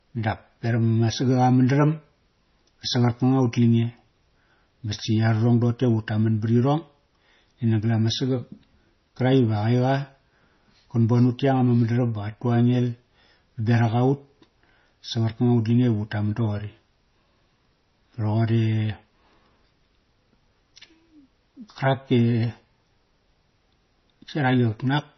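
MP3 compression runs throughout the speech, likely from a starved encoder: nothing survives above 6 kHz, which fits a rate near 24 kbps, so sibilants turn dull and lispy, while weak frequency lines flicker between frames, giving a heavy watery, swirling texture and smeared consonant attacks.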